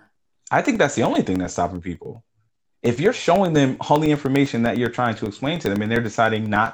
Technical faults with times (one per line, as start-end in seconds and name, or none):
0.05-6.66 periodic USB or driver dropouts